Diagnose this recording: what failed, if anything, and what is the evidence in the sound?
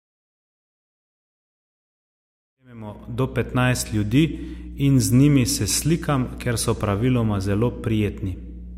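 A steady 60 Hz hum with low harmonics sits under the speech throughout, roughly 15 dB down. This is mains hum, a ground loop or nearby transformer in the analogue wiring.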